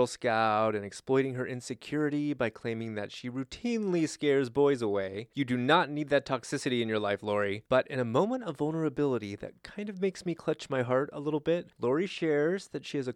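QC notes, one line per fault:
No technical faults are heard anywhere in the speech. Nothing in the clip calls for a QC entry.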